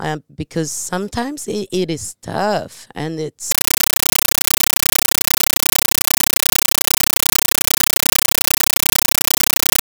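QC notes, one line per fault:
3.51–9.82 s: compressed stream played as audio. Right after "it is tough and", the speech is replaced by harsh, very loud chattering static that runs to the end. The receiving end is treating an undecoded Dolby Digital (AC-3) bitstream as ordinary PCM, which fits a 448 kbps stream. Each coded frame comes out as a 9.33 ms burst of noise followed by zero padding, repeating at 31.25 per second, which produces the rapid rattling texture.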